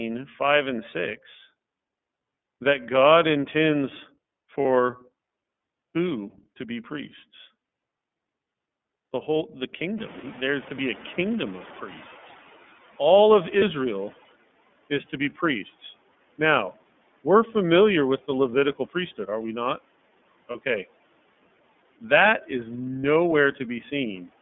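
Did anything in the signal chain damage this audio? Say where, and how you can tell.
Yes. At the codec stage, the whole clip is iLBC-coded speech with plainly audible roughness and a synthetic edge. A spectrogram shows energy confined to roughly 200 Hz to 3.5 kHz, with a hard ceiling. The 30 ms frame structure fits the 13.33 kbps iLBC mode.

At the network stage, there are lost iLBC frames at 4.61, 13.59, 20.51 and 23.01 s, each lasting 30 ms. In each gap the decoder repeats the last pitch cycle with added noise, so it sounds like a brief buzzy, held vowel. On a spectrogram this appears as a smeared harmonic stripe, and clean speech returns immediately afterwards.

In call processing, the noise suppressor is catching up. The room noise rises sharply at about 10 s, and from 9.98 s it passes through with little reduction. Over about 4.3 s it sinks by about 14 dB, settling at 14.3 s before "is to be priests". 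On the waveform, the noise floor steps up and then decays gradually.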